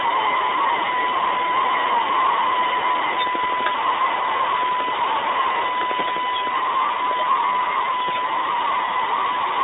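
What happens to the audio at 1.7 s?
At 1.7 s the speech carries the iLBC codec coloration that runs through the whole clip. The line band is cut to roughly 300 Hz to 3.7 kHz, so the sound is thin and lacks its upper range. Each 20 ms frame has its excitation coded on its own, which makes the speech plainly rough and slightly synthetic. That grain is consistent with iLBC's 15.2 kbps mode.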